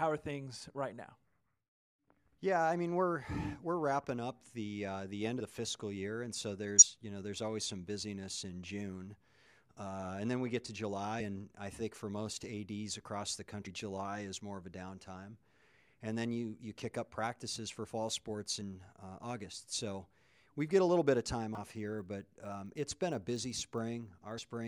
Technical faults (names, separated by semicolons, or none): compressed frames skipped